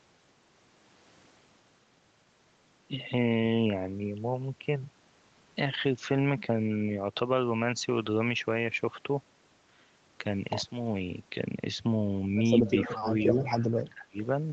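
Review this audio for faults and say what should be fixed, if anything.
Echo leak: the far end's echo canceller likely failed to cancel its loudspeaker pickup. A copy delayed by 232 ms returns at 12.66–13.01 s, about 10 dB below the main signal, and at 13.19–13.66 s, about 20 dB below. Retuning the far end's echo canceller and lowering its loudspeaker level or using a headset there would prevent this.

Speech suppressed in double talk: while both sides talked, the echo canceller likely could not tell the local talker from echo and attenuated both. The sound drops by about 25 dB at 12.98–13.08 s and again at 13.89–14.16 s. A canceller with better double-talk detection and gentler suppression would keep the talker audible during overlaps.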